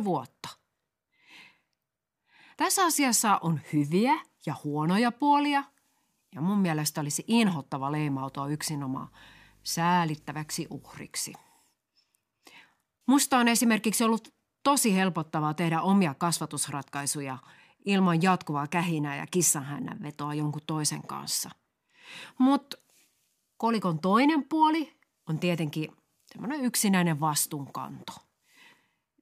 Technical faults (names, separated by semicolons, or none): video or display buzz